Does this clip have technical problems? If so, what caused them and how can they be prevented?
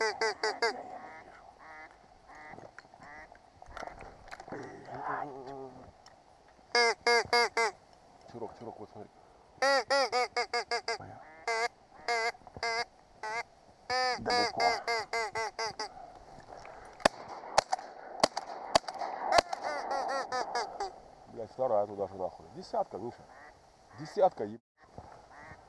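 No, nothing in this recording stood out as a technical problem on listening, so there is no cause to trace and nothing that needs preventing.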